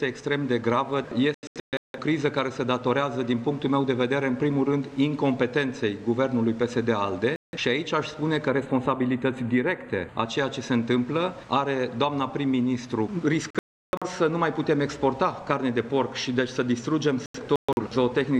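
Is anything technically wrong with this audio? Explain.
Yes, there are two problems. The first is digital broadcast dropout, which happens four times. From 1.34 to 1.98 s the audio breaks into several short holes, losing about 0.47 s in total, with the longest gap about 0.17 s. At 7.36 to 7.57 s there's a single clean gap of about 0.17 s. From 13.50 to 14.07 s about 0.43 s goes missing, including one long hole of about 0.34 s. From 17.26 to 17.81 s there are more scattered holes, adding up to about 0.26 s. Each time, the receiver lost good frames and muted until valid ones came back, so whatever was sent during those holes is gone.

The second is channel delay causing comb filtering, from 8.48 to 10.26 s. One channel arrives a tiny fraction of a millisecond late, roughly four samples, and then the channels get summed to mono. Anything common to both cancels at evenly spaced frequencies, with the first notch up around 5 kHz. 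So that stretch loses some top-end sparkle and sounds slightly hollow and phasey, with fixed dips in the spectrum.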